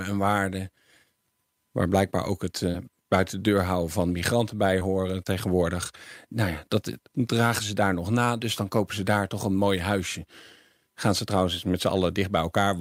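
A brief smear just after "ook het", at 2.71 to 2.76 s, and a shorter wobble at 4.80 to 4.83 s are short concealed packet loss: about 20 ms of speech arrived too late each time, and the receiver extended the preceding sound before blending back.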